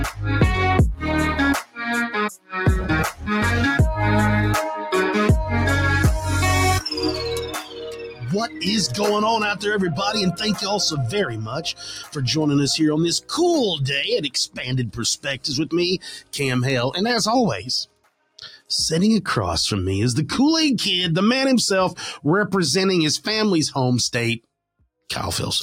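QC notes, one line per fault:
Throughout: noise suppressor applied to music or sounds. A suppressor tuned for speech is treating steady, sustained parts of the sound as noise, so the level keeps swinging by roughly 10 dB. Attacks get through while held tones and tails sink, giving a pumping, thinned-out feel.
1.62 to 1.79 s, 2.37 to 2.55 s, 3.11 to 3.27 s, 7.46 to 9.0 s, 10.32 to 10.63 s, 11.25 to 12.2 s, 14.24 to 16.36 s, 17.59 to 18.7 s: sound cut by the noise suppressor. Here it clamps down harder, with drops of about 10 to 17 dB. The short early dips are brief gulps, while the longer stretches from 7.46 s on leave sustained material and decays sagging or cut short.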